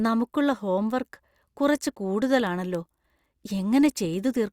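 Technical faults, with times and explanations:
0.25 to 4.41 s, word clock ticks: around fifteen sharp ticks of uneven strength, roughly every third of a second. The receiving end runs on its own clock, off by around 70 ppm, so each time the clocks slip a single sample gets dropped or repeated.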